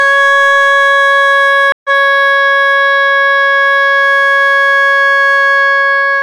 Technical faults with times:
0.00-6.22 hard clipping
1.72-1.90 stream reconnect

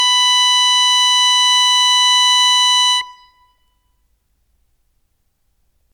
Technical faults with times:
none

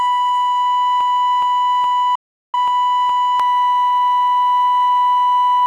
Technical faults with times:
1.01-3.40 broken-record loop
2.15-2.55 digital broadcast dropout

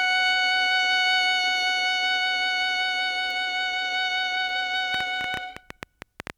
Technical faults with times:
3.31 bit error spike
4.49 bit error spike
4.94-6.31 train of clicks

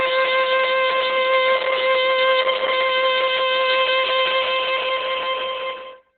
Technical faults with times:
0.00-6.17 Opus compression

